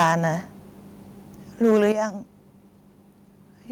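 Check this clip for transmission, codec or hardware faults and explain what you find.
Two hardware-side faults appear, both tied to the microphone input level.

Microphone overload occurs from 0.00 to 0.26 s and again from 1.63 to 1.88 s. The loudest syllables turn harsh and crackly, with a gritty edge. The likely cause is an input gain set too high, driving peaks about 11 dB past the converter's ceiling in the first stretch and about 4 dB in the second, so their tops are sliced flat. A few percent of samples are clipped at first and several percent later.

Microphone volume stepped down at 0.03 s and 1.92 s. Speech and background both drop abruptly, by about 4 dB the first time and about 9 dB the second. The second drop follows a distorted peak. This is likely the call software's automatic gain control reacting to the clipping and cutting the device's input volume in a single jump rather than easing it down.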